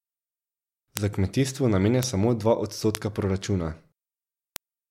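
A speech clip with four bit error spikes, at 0.97, 2.03, 2.95 and 4.56 s. Each is a single sharp tick reaching about -1 dBFS, broadband and unrelated to the speech. A flipped bit made one to three samples jump by a power of two, then return.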